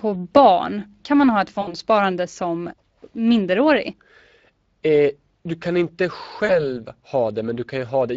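The Speex codec runs through the whole recording at a setting that sounds like roughly 20 kbps. Too few bits reach the CELP excitation, so the speech comes out noisy and hoarse, with plainly audible coding damage throughout.

VoIP packet loss concealed by the speech codec then strikes twice. From 1.61 to 1.75 s, between "man ha ett" and "som minderårig", about 60 ms of audio goes missing, which fits three lost 20 ms frames. The decoder fills the gap by extending its last pitch and filter at falling gain, so the sound smears into a fading tone or noise and stays thin until it recovers. From 6.45 to 6.67 s, just after "du kan inte", a shorter 40 ms loss, pointing to two frames, leaves the same smeared, fading residue.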